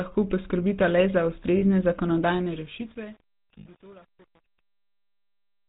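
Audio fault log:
Throughout: GSM full-rate codec. The speech has a buzzy, gravelly roughness, in keeping with a 13 kbps GSM full-rate stream. It comes from the codec driving a vocal-tract model with coarse, regularly spaced pulses. A spectrogram shows a hard ceiling at 4 kHz and smeared, grainy harmonics below it.
1.58–1.63 s and 3.58–3.67 s: lost GSM frames. A 40 ms and an 80 ms gap, which fit two and four 20 ms frames, were filled by repeating the last good frame. This gives a brief metallic ring. The spectrogram shows frozen, repeated spectral bands.
2.28–5.69 s: truncation distortion on a fade. The fade-out that runs from about 2.3 s to the end passes through a stage keeping only about 8 bits, with no dither. From 2.49 s the tail turns gritty. The waveform zoomed in shows coarse square steps.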